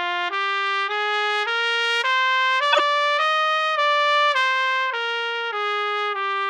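A brief blip at 0.9 s, then a louder, longer burst of squeaky noise from 2.72 to 2.8 s whose error is roughly 25 dB stronger than the first. Both are corrupt frames that were decoded: flipped bits in a couple, then a few, compressed frames made the decoder place energy at the wrong frequencies.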